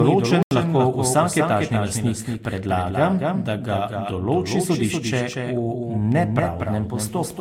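A block of digital silence runs from 0.43 s to 0.51 s, just before "lahko vsak etažni lastnik". For about 85 ms the sound drops abruptly to silence and returns with no fade. The length fits a 4096-sample output buffer that was not filled in time.

A doubled audio track runs throughout. A second full-band copy trails the original by roughly 200 ms at about 5 dB lower, with no decay or room colour. This likely comes from the same signal being captured again through a slower path.

Generation loss is also present across the whole clip. The sound is swirly, smeared and hollow, attacks are blurred, and nothing remains above 16.6 kHz. The likely cause is repeated Vorbis re-encoding, about three passes at 62 to 64 kbit/s, each re-quantising on a shifted frame grid.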